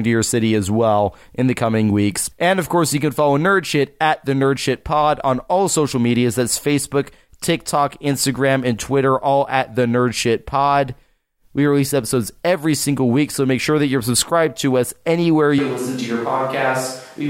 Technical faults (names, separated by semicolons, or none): switch to a distant microphone